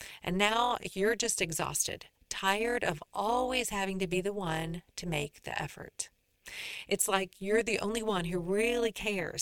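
A metallic buzz with extra tones runs through the speech from start to finish, the level pulsing by about 11 dB at around 200 Hz: overlap-add ripple, from frames rejoined with overlaps that don't sum evenly.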